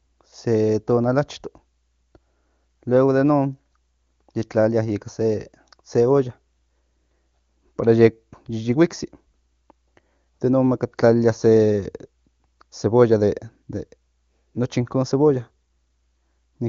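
No technical fault can be heard in the speech, which passes through the AMR wideband (HD Voice) codec at 23.85 kbit/s, a rate high enough to leave it clear, with content ending at about 7.3 kHz, as that codec's bandwidth would lead one to expect.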